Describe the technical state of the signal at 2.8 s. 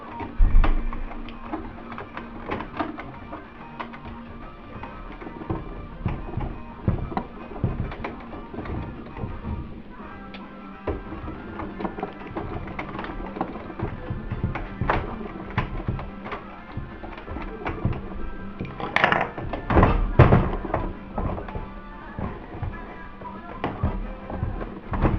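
Right around there you get a brief AAC frame loss with concealment, from 2.73 to 2.76 s. Roughly 21 ms of audio goes missing, which fits a single dropped frame, and the decoder patches it from the last good spectrum, so you hear a quick smeared, noisy blip.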